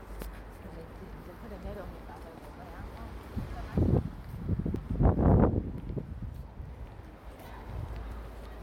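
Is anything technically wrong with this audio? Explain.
Yes. There are three points where the sound jumps forward, at 1.84 s, 4.76 s and 8.12 s. Each is a sudden skip with no gap, as if a slice had been snipped out and the ends butted together. About 40 ms goes missing at the first and last, and closer to 70 ms in the middle one. That pattern is most likely a dropped buffer (overrun): the recording side didn't pick up a block of samples before the hardware overwrote it.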